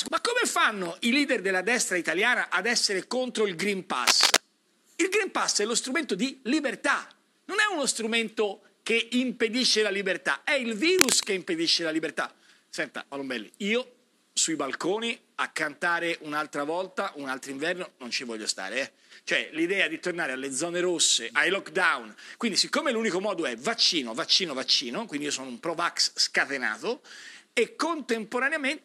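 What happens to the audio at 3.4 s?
Nothing goes wrong at 3.4 s; the audio plays through that moment intact, with no dropout, click or distortion.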